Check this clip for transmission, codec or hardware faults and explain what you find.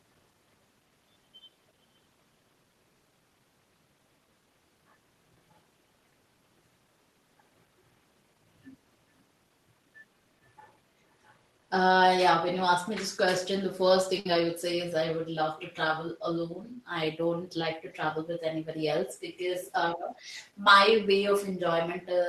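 Three transmission faults are audible in this speech clip.

At 14.19 to 14.26 s there is a short stall from a late packet. The jitter buffer ran empty, so the last sound was held for 59 ms before playback resumed, with nothing lost.

From 16.22 to 16.92 s a jitter buffer speed-up trims about 50 ms of pitch periods to shed the built-up delay, so the speech runs at 107% speed, hurried but at unchanged pitch.

At 19.64 to 19.72 s and 20.15 to 20.19 s, brief scraps of the speech return 389 ms late, about 20 dB and 30 dB down. This is likely an echo leak past a far-end canceller.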